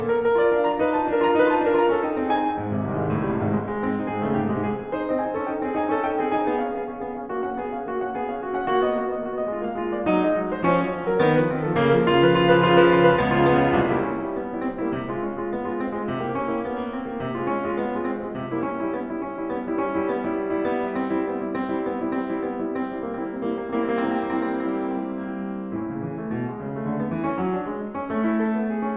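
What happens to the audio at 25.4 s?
Nothing goes wrong at 25.4 s: the music plays through that moment intact, with no audible fault.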